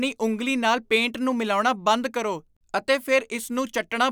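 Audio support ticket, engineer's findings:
Listened to the speech recording in full and found nothing to report, so no fault to trace on this one.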